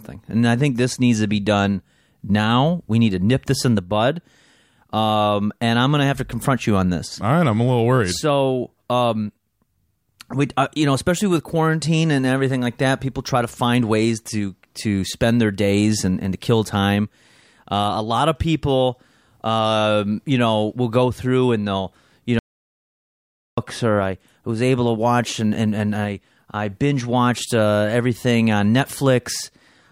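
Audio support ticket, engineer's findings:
Audio dropout to silence, 22.39 to 23.57 s. Speech cuts off after "through and they'll you" and returns at "or I was able". Gap is silent, no room tone. 1.19 s lost. Likely input link loss or mute; recorder kept writing silence.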